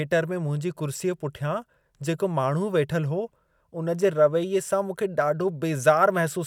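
No technical faults can be heard anywhere in the speech.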